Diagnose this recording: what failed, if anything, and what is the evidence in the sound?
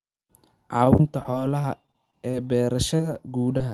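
The network stage failed. There is repeated packet loss, with robotic sound, from 0.77 to 2.35 s. The speech turns choppy across that stretch. Around ten separate holes can be heard, the longest about 26 ms. Together about 140 ms of audio never arrived, and roughly a tenth of the stretch is patched. The Opus decoder fills each hole by extending the last sound. The next hole comes before the speech can settle, so the repeats stack into that robotic texture.

Two isolated events follow, both short concealed packet loss. The first runs from 2.97 to 3.01 s and the second from 3.58 to 3.62 s. Each is a brief smear or wobble of about 20 ms, which fits a single lost 20 ms packet. This is again a network fault, not a codec one. The decoder continued the preceding sound through each gap, as pitch or shaped noise, then blended back into the real signal. Underneath, the call path's band limit near 12 kHz stays in place.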